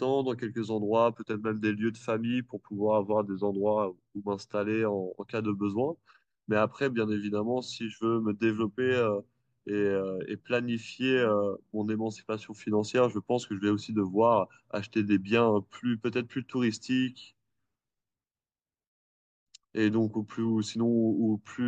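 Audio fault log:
No fault is heard in this speech clip.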